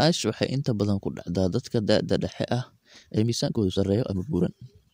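Right after "dadka da'da dhexe ah", at 2.92 s, there's a time-stretched section: the speech suddenly runs about 1.48 times faster to the end, rushed but same pitch, likely squeezed to fit.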